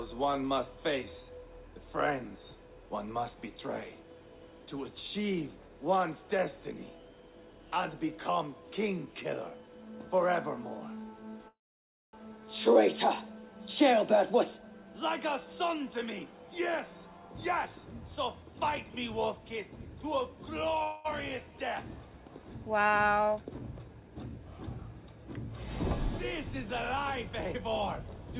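Sound carried over a call link, band-limited with nothing above 4 kHz, which points to a narrowband codec such as G.711 A-law at 64 kbps. Two call audio freezes interrupt it, most likely from packets held up in transit so that the jitter buffer ran dry. At 11.48 s the last sound is stretched into a fading buzz, then about 570 ms of silence before the audio resumes at 12.15 s. That is a 650 ms gap with nothing lost, just pushed later. At 20.83 s a shorter 214 ms freeze to 21.07 s holds the tail as a decaying smear without reaching silence. On a spectrogram both show smooth horizontal streaks fading out, the first ending in a blank column. A jitter buffer speed-up follows from 22.96 to 24.46 s, where the receiver trims out repeated pitch-period-sized slices to shed the built-up delay. The audio plays about 111% fast at unchanged pitch and sounds hurried, losing roughly a fifth of a second in total. 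In the waveform the stretch looks compressed in time, with harmonic spacing on the spectrogram unchanged.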